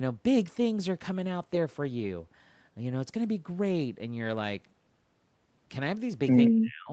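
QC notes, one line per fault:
6.49–6.91 s, speech suppressed in double talk: the final stretch of speech sinks by roughly 35 dB over about 0.4 s, nearly vanishing. Likely the echo canceller, with both sides talking at once, mistook this talker for loudspeaker echo and turned it down.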